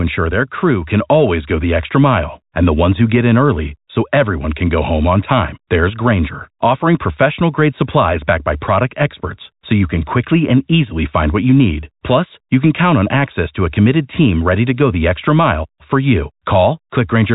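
Speech heard through a normal telephone channel with nothing above about 3.8 kHz, and nothing technically wrong with it.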